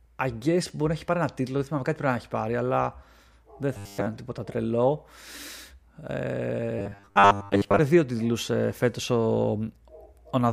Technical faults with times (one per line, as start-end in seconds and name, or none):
3.77-4.07 robotic sound from repeated short buffers
6.79-7.79 robotic sound from repeated short buffers